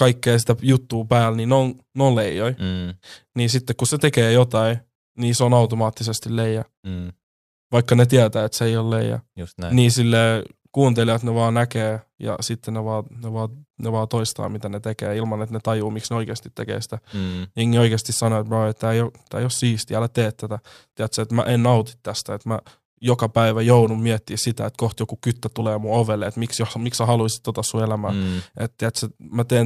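At 23.71 to 23.79 s, after "että mä joka päivä", hard clipping overdrives peaks by about 2 dB: brief crackle, flat-topped waveform, and a thin vertical smear of high harmonics on the spectrogram.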